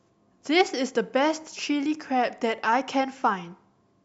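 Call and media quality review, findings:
No audible faults found in this speech recording.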